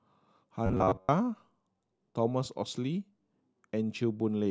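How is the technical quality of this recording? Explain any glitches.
The recording has one clear glitch. From 0.66 to 1.09 s the speech turns into a rigid metallic buzz at 94.1 Hz, the robotic sound from repeated short buffers, likely caused by a roughly 10.6 ms slice being looped while most of the real audio in that stretch is skipped.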